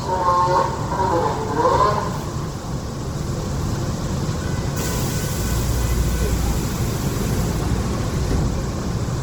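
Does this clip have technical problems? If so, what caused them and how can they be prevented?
Yes. Throughout, the sound is grainy, rough and noisy with plainly audible damage, likely from Opus compression in music mode at a rate that fits roughly 16 kbps. Prevent it by encoding at a higher bitrate.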